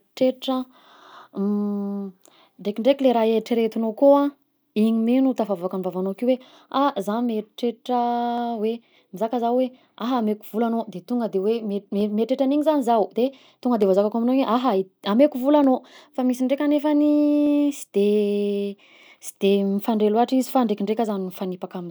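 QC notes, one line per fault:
1.13 to 21.1 s, clock drift buffer slips: a click lands every 1.82 s through the speech, around ten in all. Likely two devices on separate clocks roughly 100 ppm apart, so the buffer creeps until a handful of samples gets dropped or repeated.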